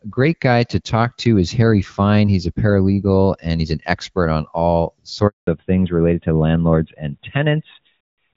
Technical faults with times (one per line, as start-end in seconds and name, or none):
5.27-5.47 handover gap
5.47-8.37 fallback to narrowband